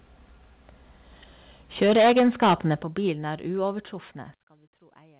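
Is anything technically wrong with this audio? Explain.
Yes. The speech shows input overload, three stepwise level drops, and a large late gain change, all heard through a narrowband call path with nothing above 4 kHz, consistent with G.711 mu-law.

Microphone overload, 1.81 to 2.73 s: the loudest passages are pushed roughly 12 dB past full scale, and the peaks are flattened against the converter ceiling, likely because the microphone input volume was set too high. A sizeable fraction of samples, on the order of one in seven, is clipped, giving a harsh, crackling edge.

Microphone volume stepped down, at 1.83, 2.82 and 3.84 s: voice and background fall together in single steps of about 2 dB, about 9 dB and about 3 dB. The pattern fits the call software likely reacting to the overload by lowering the device input volume. The 9 dB step at 2.82 s is the largest.

Sudden gain jump at 4.34 s: from this point to the end, everything drops by about 22 dB between one sample and the next, with no fade. 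The abrupt, unramped step likely comes from a digital gain setting applied instantly, so the remaining speech and noise floor become much quieter together.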